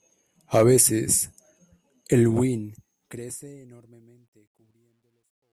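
From 2.21 s, the fade-out that starts around 2 s shows truncation distortion on a fade. The gain stage drops low bits without dither, which fits a 12-bit path. From 3.97 s to the end at 5.53 s, the tail turns gritty.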